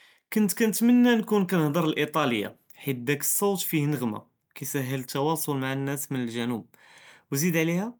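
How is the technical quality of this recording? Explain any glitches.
Nothing here sounds off: the recording runs without any glitches worth pointing out.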